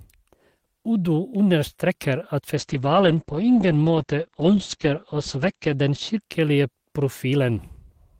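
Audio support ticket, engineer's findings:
Call bitrate drop, 2.57–6.27 s: speech goes muffled and watery, top end gone. Encoder squeezed from 32 kbps to 9 kbps after the bandwidth estimate fell, so Opus codes coarser and caps bandwidth around 8 kHz. Bottoms out for about 3.2 s, then recovers.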